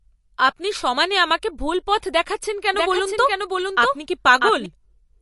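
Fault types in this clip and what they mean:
MP3 compression: The speech sounds watery and swirly, with smeared consonant attacks and nothing above 11.3 kHz. The cause is likely lossy MP3 coding at a low bitrate, around 48 kbps, dropping weak frequency detail frame by frame and cutting the treble.
Doubled audio track: From 2.74 s to 4.66 s, just after "আমাকে ভুল পথ দেখাচ্ছেন", a dry full-band copy of the speech follows roughly 0.7 s behind, about 5 dB quieter, starting and stopping abruptly. It likely comes from a second, slower capture path or from two misaligned copies left by an edit.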